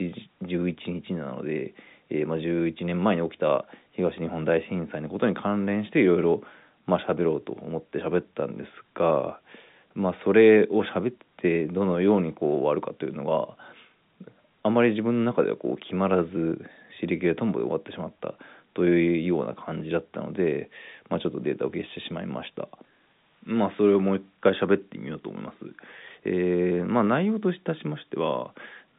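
No faults here: the speech sits in a telephone band of roughly 150 Hz to 3.7 kHz with nothing above 3.8 kHz, consistent with G.711 telephone coding in its A-law form.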